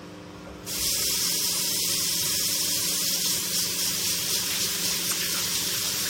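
At 2.21 to 2.25 s and again at 5.08 to 5.13 s, damaged data in a compressed stream produces a brief glitch lasting about 44 ms. Corrupted bytes make the decoder misread those frames and lose sync until it finds the next valid frame header.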